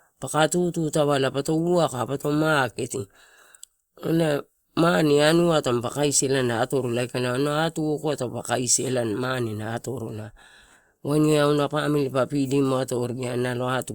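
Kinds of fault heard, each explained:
Nothing here comes across as a technical fault, so there's no kind of fault to list for this recording.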